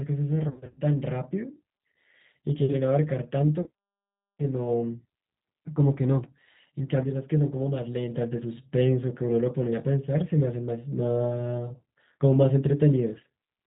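Speech clip carried through a G.729 codec at 8 kbit/s, with plainly audible damage: nothing above 4 kHz, and a rough, synthetic edge throughout. VoIP packet loss concealed by the speech codec appears from 0.48 to 0.80 s, where about 200 ms of audio is missing in gaps of up to 60 ms. Here the decoder stretches its last pitch and filter into a buzzy tone or coloured noise that fades. A shorter 40 ms dropout is concealed the same way from 3.62 to 3.68 s.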